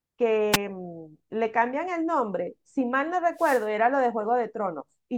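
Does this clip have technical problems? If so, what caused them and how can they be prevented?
Yes. Wireless microphone noise hits occur at 0.52 to 0.57 s and 3.35 to 3.67 s. Each is a burst of static where the radio signal faded. Placing receiver antennas well apart and in clear sight of the transmitter prevents these dropouts.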